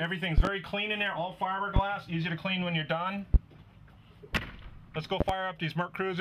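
The audio carries loud pops in five places: 0.38 to 0.49 s, 1.76 to 1.80 s, 3.34 to 3.38 s, 4.37 to 4.41 s and 5.21 to 5.33 s. The first and last places hold two pops each, so seven in all. Each pop stands roughly 20 dB above the sound. The sound carries on underneath them. The likely cause is a sudden voltage step, from a plug, switch, static or driver glitch, entering the signal path.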